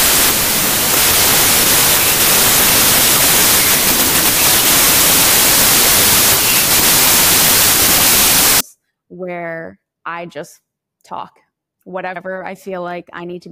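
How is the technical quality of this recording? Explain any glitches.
The recording is badly damaged at the start by a wrong sample width fault running from 0.0 to 8.61 s. The audio, stored as packed 24-bit integers, is being read as 32-bit integers, so each read sample takes four bytes where three were written. Sample boundaries drift across the byte stream, and most values mix the bytes of neighbouring samples. The result is loud, harsh noise with the speech faintly audible underneath, running about 1.33 times too fast, which raises its pitch by the same ratio.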